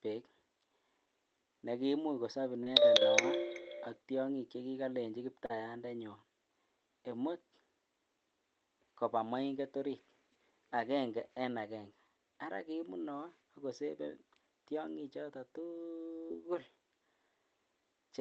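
Short concealed packet loss occurs at 2.63 to 2.68 s, 5.46 to 5.51 s and 16.27 to 16.32 s. Missing packets were bridged by extending the preceding sound, which leaves a brief smear or wobble rather than the silent gap of an unconcealed dropout.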